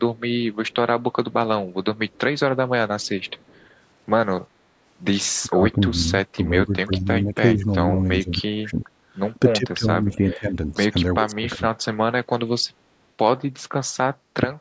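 The far end's echo canceller likely let part of its loudspeaker pickup through, producing echo leak: a very faint copy of the speech returning about 379 ms late, heard in brief scraps at 0.16–0.2, 0.54–0.75, 1.96–2.2 and 3.01–3.67 s.

Later, with both sides talking at once, the echo canceller likely could not separate the near talker from the echo and turned everything down. This speech suppressed in double talk produces deep dips and dropouts from 5.42–8.9, 9.58–10.77 and 11.2–11.62 s.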